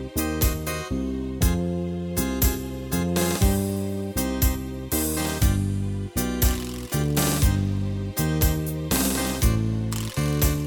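No technical faults can be heard anywhere in the recording. Nothing in it points to a dropout, a glitch or any other failure in the chain that carried it.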